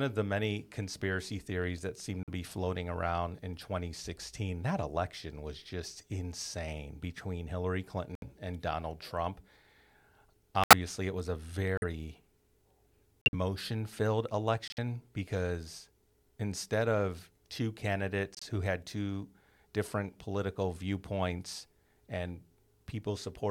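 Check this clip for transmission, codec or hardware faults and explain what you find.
Seven corrupt frame muted dropouts: 2.23, 8.15, 10.64, 11.77, 13.22, 14.68 and 18.35 s, each 64 to 124 ms. Damaged compressed frames were rejected by the decoder and replaced with silence, giving abrupt holes in the speech while its timing stays intact.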